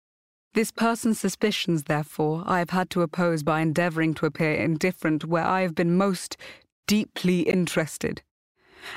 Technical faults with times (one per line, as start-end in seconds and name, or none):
7.51-7.54 damaged data in a compressed stream